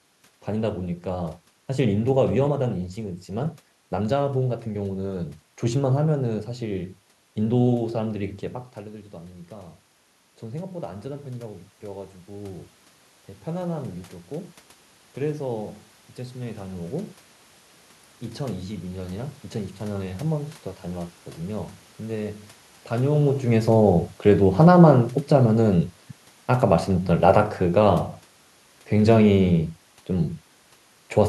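From about 24.28 s to 29.63 s there's automatic gain falling: the gain control decided the input was running hot or too noisy and eased its gain down over those five or so seconds, by about 5 dB in total. You hear the speech sink steadily, and the room noise drops right along with it, which is the giveaway that it's the gain moving and not the talker. The level shifts around 8.5 s and around 23 s are only the talker moving.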